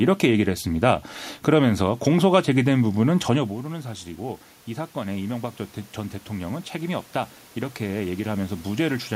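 At 3.36 s the speech level at the microphone falls by about 13 dB, around the time the talker moves back, and the automatic gain rising starts. The control slowly raises its gain by about 4 dB until 5.65 s, so the voice and the room noise swell together. The same slow lift, again about 4 dB after an input drop of about 13 dB, repeats from 6.27 to 9.04 s.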